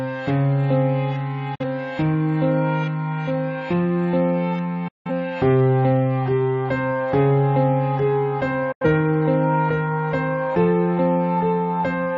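Digital broadcast dropouts cut the sound at 1.55 to 1.64 s, 4.88 to 5.11 s and 8.72 to 8.85 s. Each time the receiver loses frames and mutes, with an 8 ms fade, leaving flat waveform gaps and blank vertical spectrogram bands.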